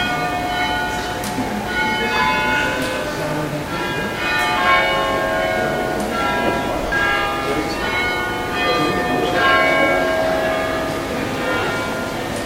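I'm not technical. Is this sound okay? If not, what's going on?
No. There are lost LE Audio frames at 6.87–6.92 s and in several short gaps between 11.60 and 11.70 s. The Bluetooth link dropped pieces of sound, and the receiver patched each gap with a noisy copy of what came just before, causing brief smeared blips.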